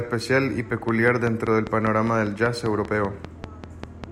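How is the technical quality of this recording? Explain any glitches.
The recording is marred by a train of clicks over most of the speech. From 0.89 s to 4.05 s there's a steady tick at about 5.1 per second, roughly fifteen pulses poking out around 10 dB above the speech, even through pauses. The evenly spaced, similar pulses most likely come from interference picked up off nearby equipment or a faulty connection or power supply.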